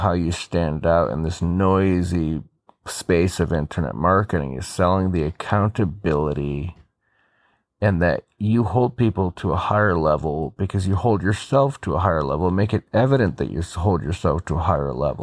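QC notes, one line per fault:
No faults heard anywhere in this speech recording.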